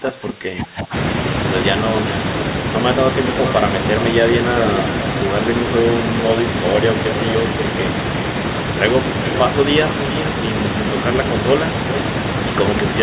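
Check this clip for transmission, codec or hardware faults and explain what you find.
One fault, at the very start of the speech. The audio is band-limited to about 4 kHz throughout, consistent with a narrowband G.711 call path, which is expected for that codec.

From 0.00 to 0.94 s the speech is pushed down by up to about 25 dB for roughly a second: speech suppressed in double talk. The likely cause is the echo canceller mistaking simultaneous far-end talk for echo and attenuating the near-end voice along with it, so the opening sounds dipped.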